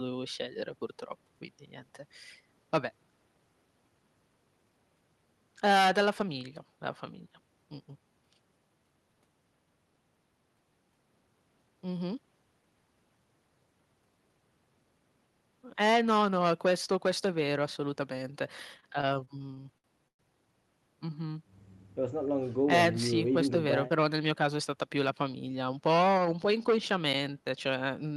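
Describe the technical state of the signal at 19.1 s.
At 19.1 s it's mid-stutter: repeated stalls from 18.77 to 20.21 s. The jitter buffer keeps emptying, so the last sound gets stretched, up to 111 ms.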